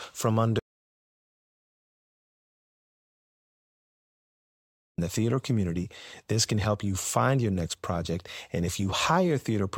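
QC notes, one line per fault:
0.59–4.98 s, audio dropout to silence: input likely lost while recording continued writing silence, so the speech cuts out into dead silence for 4.39 s.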